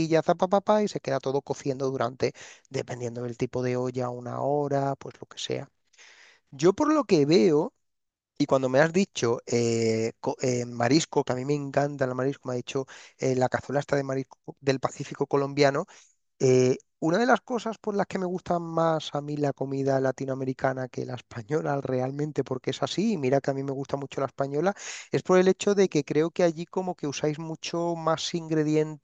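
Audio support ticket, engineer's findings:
No audible faults found on listening; playback of the speech recording shows no symptom to attribute to any component.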